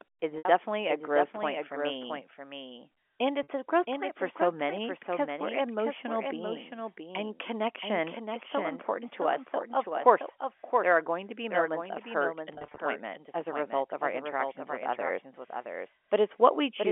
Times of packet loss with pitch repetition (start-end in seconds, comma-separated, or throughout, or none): 0.38-0.45, 3.43-3.48, 12.54-12.78